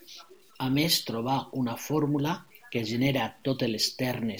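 Across the whole speech clip there is a grainy, rasping distortion that rides on the sound itself, thickening on quiet stretches and trailing syllables, where decays break up and sputter instead of fading smoothly. The roughness sits only about 35 dB below the signal. This is low bit depth without dither: the audio was likely truncated to around 9 bits with no dither, so the rounding error tracks the waveform rather than forming a steady hiss.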